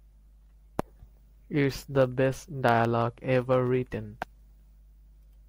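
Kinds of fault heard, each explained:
Mains hum: The power line leaks into the recording, likely through a ground loop or a nearby transformer. A steady 50 Hz tone with low harmonics sits under the speech for the whole clip. It stays about 30 dB below the speech level.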